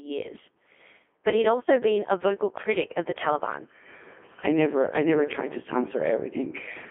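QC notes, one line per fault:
throughout: Codec 2 vocoder. The speech is rebuilt from pitch, voicing, energy and a coarse spectral envelope rather than the original waveform, giving a robotic, buzzy quality with heavy damage. The sound suggests about 2.4 kbit/s, confined to a 250 to 3400 Hz line band.
0.32 to 0.48 s: bit errors on digital voice radio. Corrupted bits in a handful of frames, roughly a few percent, scramble the pitch, level and spectral parameters. The synthetic speech briefly jumps in pitch and tone and breaks into warbling, bleepy gibberish.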